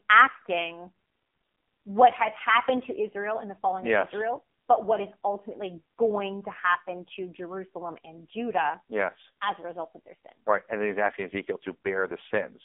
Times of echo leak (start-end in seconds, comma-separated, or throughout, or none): none